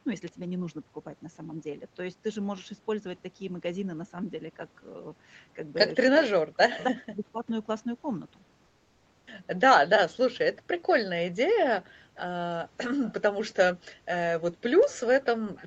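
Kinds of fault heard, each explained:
Echo leak: The far end likely plays the call on a loudspeaker, and its echo canceller does not fully remove it. A delayed copy of the speech, about 0.34 to 0.40 s behind, comes back, loudest near 6.2 s at about 10 dB down, fainter around 12.2, 13.0 and 14.8 s.
Speech suppressed in double talk: When both sides talk at once, the echo canceller likely cannot tell the near talker from the loudspeaker echo and turns both down. From 6.71 to 7.51 s the speech drops sharply, by roughly 40 dB at its deepest, for around 0.7 s.
Comfort noise in place of the background: The sender likely stops transmitting during a pause, Opus discontinuous transmission, and the receiver fills the gap with synthetic noise. From 8.65 to 9.27 s the real background gives way to a smoother noise about 8 dB quieter.
Onset clipped by the voice detector: The sender's voice detector likely reacts late when sound resumes, so the first part is never sent. 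At 9.19 s about 80 ms is missing, and the speech starts abruptly out of the comfort noise, without its soft beginning.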